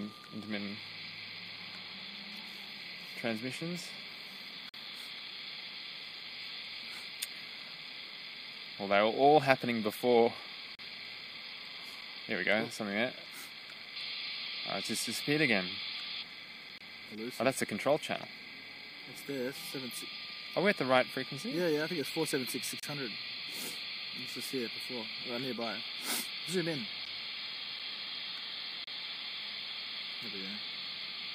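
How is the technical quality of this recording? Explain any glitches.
The recording is interrupted by five short, hard-edged silences, all from a gap between stream segments. They fall at 4.69 s (about 46 ms), 10.75 s (37 ms), 16.78 s (26 ms), 22.80 s (30 ms) and 28.84 s (31 ms). The regular spacing of roughly 6 s fits 6-second stream segments. At each boundary the timestamps leave a small hole, and the player fills it with silence. The sound simply stops and restarts abruptly, with nothing missing on either side.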